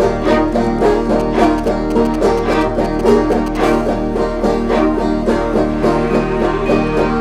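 From 1.2 s to 3.57 s, GSM signalling bursts cut across the music. A 2G phone close to the recording gear is sending short groups of radio bursts, as it does while signalling to the network. The audio circuit rectifies those pulses into sound. The result is a galloping dit-dit-dit of short buzzes at about 217 Hz. It sits roughly 15 dB under the music.

At 3.64 s a GSM phone buzz takes over and runs to 5.95 s. Now the phone is in a call and transmits in bursts, pulsing 217 times a second. Each pulse is rectified, so a hard, raspy 217 Hz buzz sits under the music. It carries many harmonics and bears no relation to the musical content. It stays nearly steady, at about 26 dB below the music.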